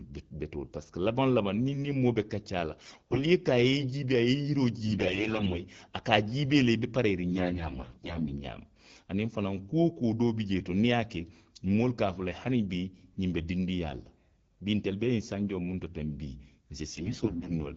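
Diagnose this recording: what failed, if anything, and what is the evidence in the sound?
The radio link failed, and you can hear it as AMR bit errors. The speech turns hoarse and gargly at 2.79–3.23 s (right before "a ye i jiibee"), 4.86–5.61, 7.32–8.38 and 16.91–17.61 s, while pitch and level roughly hold. Flipped low-protection bits, around 15 percent of them, misplace the excitation pulses and skew the fine gain and spectrum values.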